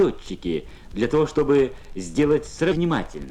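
At 2.71 to 2.77 s the sound jumps abruptly ahead with a short blip, the mark of a stream segment skipped, likely because one segment failed to load and playback resumed at the next. The waveform shows a hard discontinuity; the spectrogram, a thin vertical broadband line.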